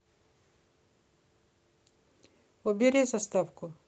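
No technical faults are audible.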